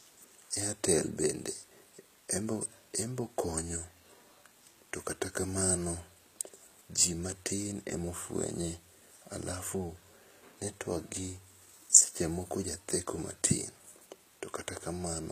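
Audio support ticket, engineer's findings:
Throughout: gritty, metallic sibilance in the speech, with the top band disconnected from lower harmonics and nothing above 14.9 kHz. Likely HE-AAC compression; synthetic replicated treble, unlike a plain low-pass, fits about 20 kbps.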